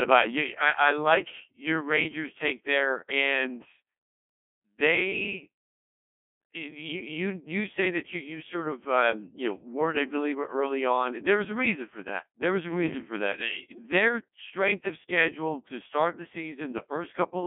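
From start to end the speech passes through a Codec 2 vocoder, at a rate that fits about 1.2 kbit/s. Only pitch, voicing, energy and spectral envelope survive, resynthesised from sine waves, so the voice is heavily robotic and buzzy, confined to 200 Hz to 3.4 kHz, with nothing above 3.5 kHz.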